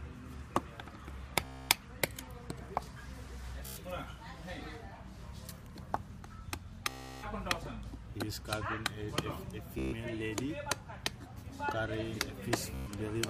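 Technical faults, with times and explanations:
1.45–1.69, 3.66–3.83, 6.89–7.26, 9.79–9.94 and 12.74–12.91 s: Bluetooth stutter. Each time, the wireless link drops data, and the receiver replays its last short buffer. This produces a rapid machine-gun buzz. The gaps last about 0.24, 0.11, 0.34, 0.14 and 0.12 s. The sound then jumps ahead, as if it had played on.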